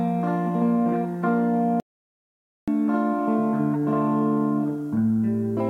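At 1.8 s the audio drops out to silence and stays there until about 2.68 s, a gap of roughly 0.88 s. The sound stops abruptly in mid-flow and resumes just as abruptly, with nothing in between, not even background noise. That dead-silent quality points to an audio dropout to silence, most likely a lost input or link while recording continued to write empty samples. Whatever sound occurred during that stretch is not recoverable.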